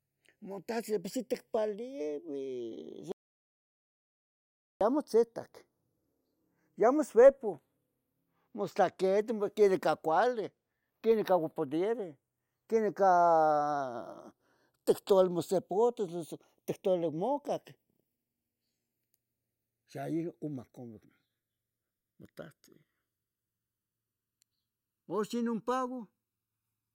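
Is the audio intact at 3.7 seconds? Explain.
No. At 3.7 s the speech is in an audio dropout to silence that runs from 3.12 s to 4.81 s. About 1.69 s of sound is missing. The speech stops abruptly and returns just as abruptly. The gap is silent with no room tone. That points to the input being lost while the recorder kept writing silence. A disconnected device or failed link is the likely cause. Whatever was said in that span is gone.

The two channels are also drifting apart through the whole clip, including at this point. They behave as if clocked separately, with an error of around 50 ppm. The delay between them slowly grows to about 0.7 ms. Summed to mono, this sweeps comb notches through the spectrum. It is heard as a slow flanging on the speech on either side of the gap.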